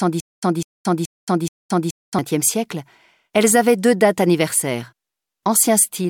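From the very first moment until about 2.19 s the sound is caught in a stutter with silent gaps, already under way when the clip opens. A fragment of about 0.2 s plays, then roughly 0.22 s of dead silence follows, and the cycle repeats four times at a steady 0.43 s period. The likely cause is a stalled stream that replays its last buffered fragment at each retry before running dry. The audio that should have filled that stretch is simply missing. On a waveform this shows as identical blocks separated by flat silent gaps. A spectrogram shows matching vertical slabs of energy alternating with fully blank columns.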